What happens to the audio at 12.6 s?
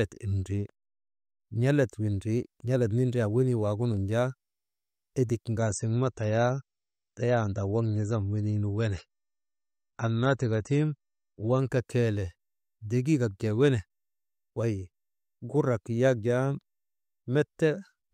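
Nothing goes wrong at 12.6 s; the audio there plays through intact, with no dropout, click, distortion or other fault.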